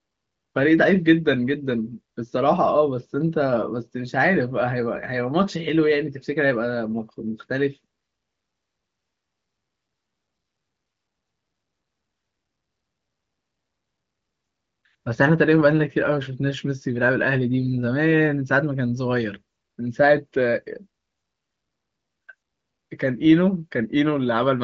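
Nothing goes wrong anywhere in this speech, which comes through as regular HD Voice over the AMR wideband codec, with a top end that stops around 7.5 kHz and a fullness that fits its 23.05 kbit/s mode.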